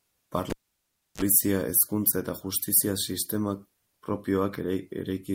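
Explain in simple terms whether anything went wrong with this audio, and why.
At 0.50 seconds the speech is cut off by a cable pulled and plugged in. A live lead comes out of its socket with a pop. For about 0.67 seconds there is near silence. As the plug goes back in, only its tip touches at first. That picks up a short burst of 50 Hz mains hum, lasting about 36 ms. A second pop follows, and the speech returns at 1.22 seconds with "hezkuntza eta justizia".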